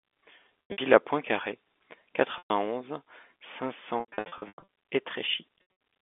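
Brief held, buzzy stretches break the speech at 0.67 to 0.78 s, 2.38 to 2.50 s and 5.58 s, and a longer broken patch runs from 4.0 to 4.62 s, where about 440 ms is missing in runs of up to 100 ms. This is packet loss with pitch repetition: the receiver loops the last pitch period to cover each gap, in what fits 20 ms packets, over telephone-band G.711 audio limited to roughly 250 Hz to 3.5 kHz.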